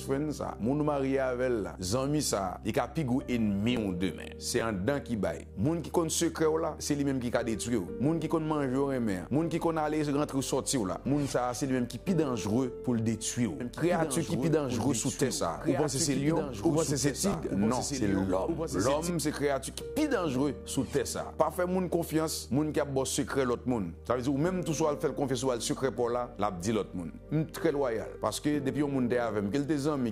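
At 4.59 to 4.61 s there is a brief jumbled blip, the same stumble heard again at 17.32 to 17.34 s and at 23.3 to 23.32 s. These are chunks out of order: each time a 10 ms block of audio arrived one slot late and played after the block that should have followed it. Nothing goes missing, but the swapped order creates three hard joins, which is what produces the scrambled moment.

From 13.6 s to 19.1 s a second copy of the sound runs underneath the first, about 5 dB quieter and trailing by roughly two seconds. It is a clean, full-range duplicate with no reverberant tail or room colour, and it cuts in and out abruptly at those boundaries. This doubled audio track is likely caused by the same signal being picked up a second time through a slower path, or an edit holding two copies out of step.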